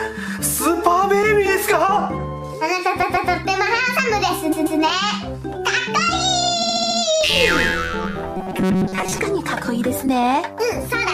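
Repeated frames show up three times. At 3.02 s and again at 4.51 s, a 139 ms chunk plays twice more, each adding about 0.28 s. At 6.62 s a shorter 70 ms chunk loops five extra times, giving a quicker stutter.

From 8.37 to 9.21 s the sound turns into a stiff, metallic buzz at about 188 Hz, robotic sound from repeated short buffers. The likely cause is audio arriving too slowly, so a roughly 5.3 ms buffer gets looped while most of the real audio is skipped.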